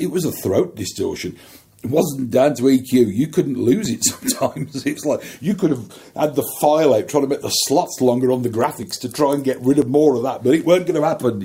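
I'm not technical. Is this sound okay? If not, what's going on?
No. There are four tiny skips, at 3.85, 4.84, 8.83 and 9.82 seconds. This is an overlap between stream segments. The audio comes in chunks, here about one second each. Neighbouring chunks claimed the same moment, so a sliver of sound was cut out and the audio jumps.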